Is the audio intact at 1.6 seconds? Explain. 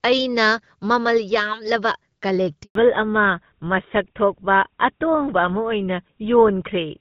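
Yes, the speech at 1.6 seconds is intact, carried cleanly through the AMR wideband (HD Voice) codec at 12.65 kbit/s with no fault at that moment.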